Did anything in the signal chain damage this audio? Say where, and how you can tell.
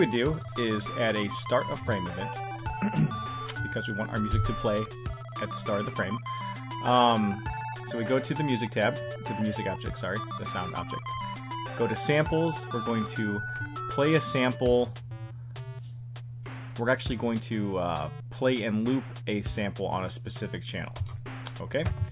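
No, nothing in the signal chain damaged this audio.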